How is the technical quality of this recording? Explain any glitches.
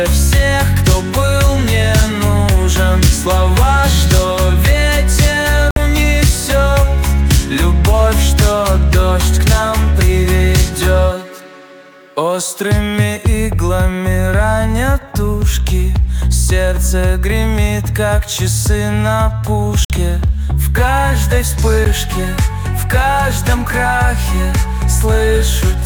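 Three brief dropouts mar the recording. Bluetooth stall at 5.71 to 5.76 s, 19.85 to 19.90 s and 21.85 s: the sound cuts to silence for 57, 53 and 12 ms, likely because delayed wireless packets drained the playback buffer before it resumed.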